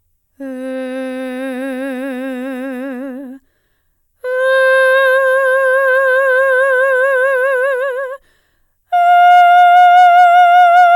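A crackle rides on the loudest peaks of this music from 9.2 s to the end. It is hard clipping: the signal runs about 1 dB past what one stage can pass, so those peaks are cut flat, adding brittle high harmonics.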